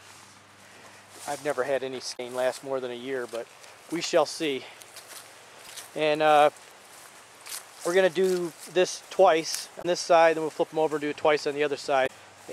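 You get four short hits of damaged data in the compressed stream: 2.13 to 2.20 s, 5.65 to 5.69 s, 9.78 to 9.85 s, and 12.03 to 12.10 s. Each is a brief chirpy squawk or blip, none longer than about 70 ms. Bad bytes got into the compressed data at those points, so the decoder misread or threw out the frames there, lost its place, and had to hunt for the next valid frame header before it could decode cleanly again.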